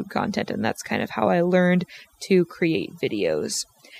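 Across the whole speech clip there is overdone noise removal: a noise reducer set too aggressively has pulled individual frequency bands down whenever they sat near its noise estimate, taking quiet vocal detail with them. The voice sits over a lowered, twinkling background; a spectrogram would show scattered isolated specks in the gaps and a patchy, holed speech spectrum.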